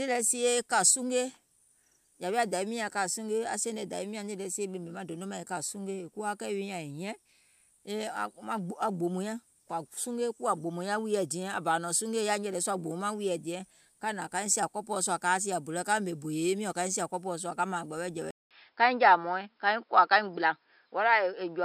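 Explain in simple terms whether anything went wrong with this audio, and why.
Something does go wrong near the end. At 18.31 s the sound drops out for 0.2 s, then comes back duller, a little louder or softer, with a different background hiss and nothing above 5.2 kHz until the end. That's likely an input switched to a poorer device.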